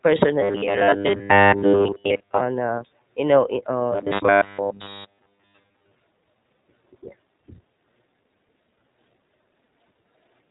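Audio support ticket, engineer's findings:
Narrowband, slightly rough and synthetic speech for the whole clip, with no content above about 3.8 kHz. iLBC codec: 20 ms frames coded independently, around 15.2 kbps, so the codec damage is plainly audible throughout.

Rigid metallic buzz at 0.41–2.40 s and 3.92–5.94 s. The speech still roughly follows its contour, pinned to a 100 Hz drone. Robotic sound from repeated short buffers, likely starved playback. A 10 ms block is looped in place of most of the real audio, and the 100 Hz drone fits that length.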